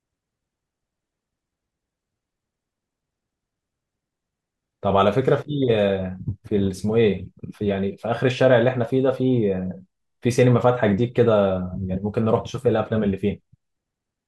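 No technical faults detected.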